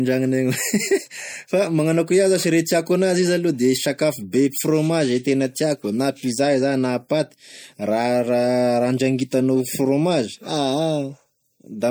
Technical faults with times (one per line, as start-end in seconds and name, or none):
0.00-11.91 MP3 compression